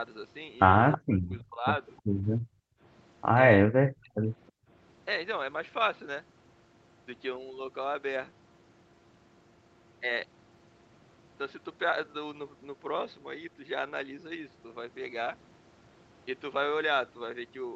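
At 0.92 to 0.98 s and again at 1.97 to 2.01 s there is echo leak: brief scraps of speech returning 323 ms late, about 15 dB below the talker the first time and about 40 dB below it the second. The likely cause is an echo canceller on a loudspeaker end letting residue through. On a spectrogram these show as faint repeated harmonic patterns offset from the originals.

From 0.97 to 1.66 s and from 3.6 to 4.28 s, speech is suppressed in double talk. The canceller, likely unable to separate the near talker from the echo, pulled the voice down by around 40 dB in pieces, totalling roughly half a second and then most of a second. The waveform shows the envelope dropping to near silence.

Between 2.4 and 2.82 s and between 4.56 and 4.69 s, the background is gated by the echo canceller. It clamped the microphone while the loudspeaker played, so the room tone falls by about 38 dB and then 36 dB for a few hundred milliseconds and a brief moment. 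These appear as blank patches in the noise floor.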